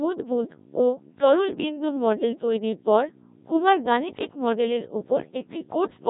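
Codec 2 vocoder damage runs throughout: the speech is rebuilt from pitch, voicing and envelope as sine waves, sounding robotic and buzzy, consistent with about 1.3 kbit/s, and empty above 3.8 kHz.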